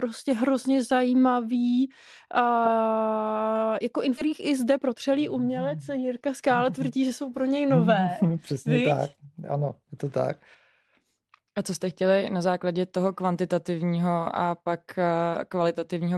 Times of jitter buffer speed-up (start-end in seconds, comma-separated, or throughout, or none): 4.26-7.34